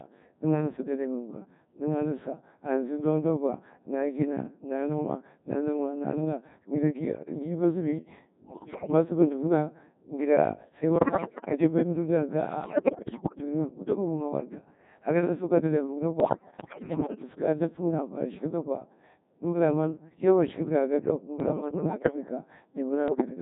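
The whole recording runs through a Codec 2 vocoder, and the degree of damage points to a very low rate, around 1.6 kbit/s. Only pitch, voicing, energy and a coarse spectral envelope survive. The decoder rebuilds the speech from summed sine waves rather than the original waveform, so the voice comes out heavily robotic and buzzy throughout, with breathy and noisy sounds badly smeared.

Bit errors on digital voice radio hit six stretches: 8.44–8.92 s, 10.96–11.52 s, 12.64–13.38 s, 16.20–17.24 s, 21.40–22.16 s and 23.08–23.26 s. At this bitrate each corrupted bit can reset the pitch, level, voicing or spectral shape of a whole frame. In these stretches the synthetic voice lurches in pitch and loudness and breaks into bleeps, warbles and garbled robotic noise. The 21.40 s burst is milder, consistent with a lower error rate than the heavy, roughly one-in-seven corruption elsewhere.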